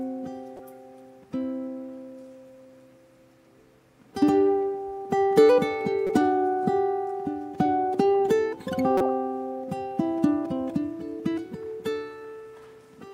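Corrupt frame decoded at 0.57 to 0.60 s, 6.07 to 6.10 s and 8.98 to 9.10 s: damaged bits in compressed frames were decoded anyway, so misread gains and codes scattered energy into the wrong frequencies for a few frames each time. The result is a short, alien blip or squeak. The first is faint, peaking around -30 dBFS. The second is louder, near -15 dBFS. The last is longest and strongest, near -10 dBFS.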